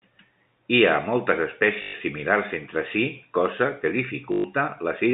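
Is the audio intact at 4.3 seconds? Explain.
No. Just after "entre si cosa que", from 4.32 to 4.44 s, there is packet loss with the last packet repeated. About 120 ms of audio went missing, and the receiver kept replaying the last good packet. The run buzzes in a brief robotic stutter, which fits six 20 ms packets.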